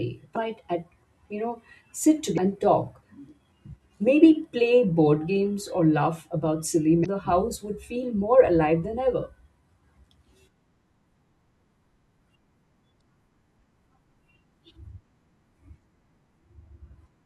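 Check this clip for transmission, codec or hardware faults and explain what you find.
The speech carries four short bursts of damaged data in a compressed stream, at 0.35 s, 2.34 to 2.38 s, 7.02 to 7.06 s and 12.97 to 13.01 s. Corrupted bytes make the decoder misread frames and hunt for sync, producing a brief chirp, squawk, click or short hole at each point.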